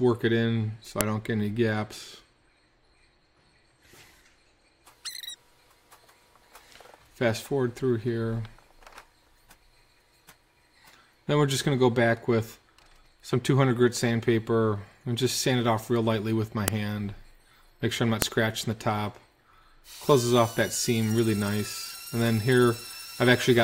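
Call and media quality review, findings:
File header played as audio: sharp, loud clicks at 1.01 s, 16.68 s and 18.22 s. Probable component is the concatenation or streaming stage, which passed each WAV header through as samples. Unlike a dropout click, no gap and no signal loss; each click marks a segment boundary.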